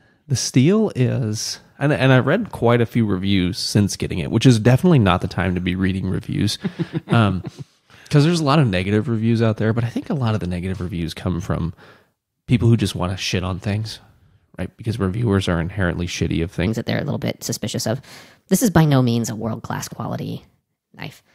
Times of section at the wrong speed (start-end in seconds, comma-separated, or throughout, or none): 16.67-21.34